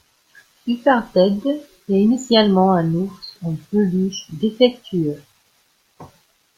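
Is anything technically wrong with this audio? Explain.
No, nothing technically wrong stood out on listening to this speech clip.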